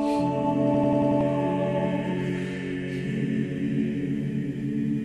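A system hang loop runs from 0.74 to 1.21 s. The playback side stalled while the audio hardware kept reading the same ring buffer, so one slice of about 93 ms repeats exactly five times, which fits a 4096-sample buffer. At 10.8 repeats per second the result is a rapid, mechanical machine-gun stutter rather than a buzz, and roughly half a second of the real audio never plays.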